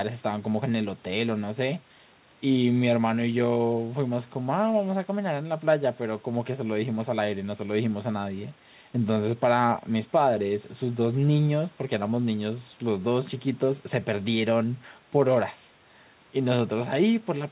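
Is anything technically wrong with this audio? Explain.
No, nothing is technically wrong with this audio.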